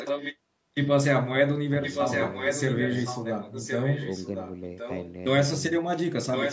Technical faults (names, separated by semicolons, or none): echo leak